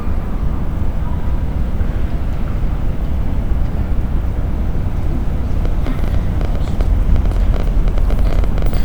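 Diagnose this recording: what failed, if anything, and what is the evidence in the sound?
A train of clicks runs from 5.65 to 8.78 s: roughly forty near-identical pulses at an uneven average of 11.6 per second, peaking about 5 dB above the sound. The likely cause is interference in analogue wiring or a faulty connection or power supply. Unlike buffer dropouts, these add pulses rather than gaps.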